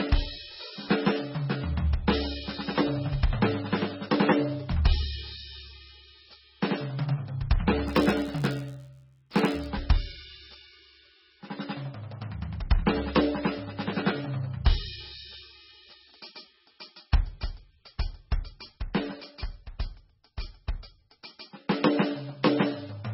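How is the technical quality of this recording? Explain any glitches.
Pretty rough, honestly. The whole music track is swirly, and the smeared, watery texture points to heavy MP3 compression at a very low bitrate as the likely cause. From 7.87 to 9.70 s there's an 86.1 Hz buzz, a filter restarted on every block, which fits a 512-sample block, each one kicking off with a tiny transient.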